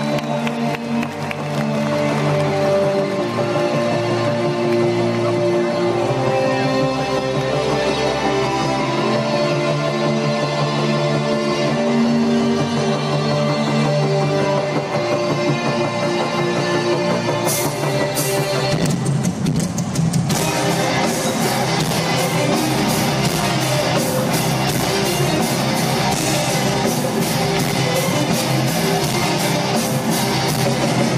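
Nothing stood out on listening; no moment in the recording calls attention to itself as a technical problem.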